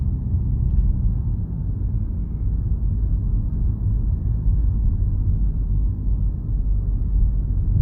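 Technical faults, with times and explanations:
No technical faults can be heard; the signal stays steady and intact across the whole recording.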